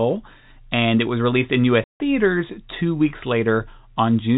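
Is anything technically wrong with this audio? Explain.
Yes. Just after "it was released in", the speech cuts out completely from 1.84 s to 2.0 s. This is packet loss filled with silence. The 160 ms gap fits eight lost 20 ms packets, and the receiver played digital silence in their place. The audio stops and restarts abruptly at hard edges. On a waveform the gap is a flat line. On a spectrogram it is a clean vertical blank band cutting through the G.711 telephone band, which ends at 4 kHz.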